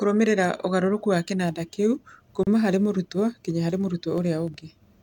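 At 2.43 s, just after "ũgarũrũku wa kĩnanda kĩu" and before "harĩ mũrutwo", a gap at a join of encoded pieces drops about 35 ms of silence into the speech. Two separately encoded pieces were butted together untrimmed, keeping encoder delay and final-frame padding. Unlike a dropout, it is one clean hole, edges smeared, with speech resuming exactly where it stopped.

From 4.02 to 4.60 s, processor overload crackle rides on the speech: the processor missed several audio deadlines in a row, each leaving a tiny silent gap. The gaps are very short, fitting buffers of roughly a millisecond and a half. The result is a gritty tearing burst rather than a single clean gap.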